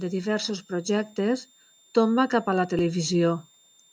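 A switching supply whistle sits under the speech throughout: a faint, high tone near 3.6 kHz that drifts slightly, from a power supply cycling at an audible rate.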